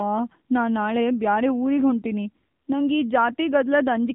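Speech passed through the AMR narrowband mobile codec throughout, with plainly audible damage: a buzzy, synthetic quality that points to a low-rate AMR-NB mode near 7.4 kbps. A spectrogram shows a hard ceiling at 3.8 kHz, with nothing above it.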